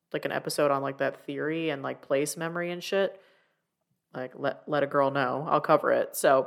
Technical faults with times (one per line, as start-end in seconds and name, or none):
none